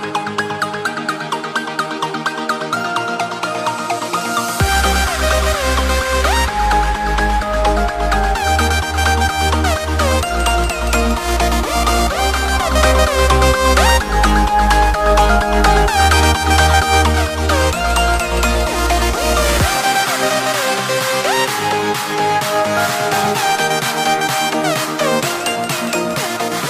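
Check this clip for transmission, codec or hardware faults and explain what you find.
There's one fault here. From 12.25 to 17.40 s it's digital radio blending to analogue: the receiver lost the digital stream and cross-faded over about 430 ms to the station's FM feed, then back. Hiss rises to roughly 35 dB under the programme, and the level shifts by about 3 dB.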